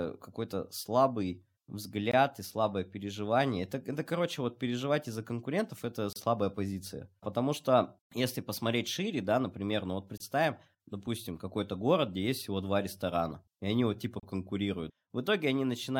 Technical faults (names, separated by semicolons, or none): gap between stream segments